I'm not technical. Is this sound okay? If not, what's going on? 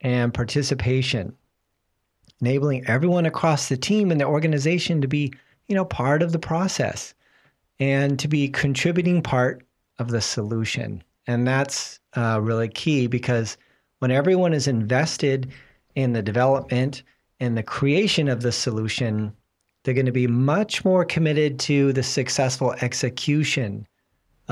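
No. There is hard clipping at 3.44 s, 9.38 to 9.40 s and 16.41 to 16.44 s. The loudest moments of the speech were too big for the recording to hold. Their tops got sliced off flat. You hear a brief crackle each time.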